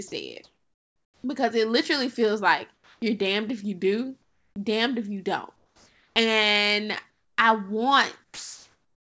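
At 0.08 s a 40 ms piece of the speech vanishes and is replaced by steady noise before the sound resumes at 0.12 s. This is sound dropped by the voice detector: the sender's speech detector likely classed that brief, quiet moment as background, stopped transmitting, and the receiver filled the 40 ms gap with comfort noise, so that slice of speech is lost outright.

Through the pauses, comfort noise in place of the background recurs at 0.44–1.24 s, 2.74–3.02 s, 4.22–4.56 s, 5.56–6.16 s, 7.10–7.38 s and 8.24 s to the end. During each pause the real room tone, sitting roughly 43 to 50 dB below the loudest speech, gives way to a flat, featureless hiss about 2 to 4 dB quieter. The likely cause is discontinuous transmission, with the receiver synthesising noise from occasional background updates. Across the whole call path nothing is present above 8 kHz, which points to a wideband codec such as G.722.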